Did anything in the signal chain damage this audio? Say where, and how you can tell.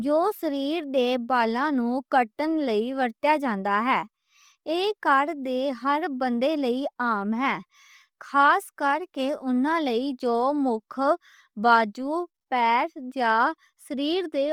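Yes, at the codec stage, throughout the speech: a breathy, grainy edge on every syllable, likely from Bluetooth LC3 compression. On a spectrogram the upper band shows noise-filled patches in place of harmonics, blocked at 10 ms intervals, which fits heavy damage from a low rate around 32 kbps.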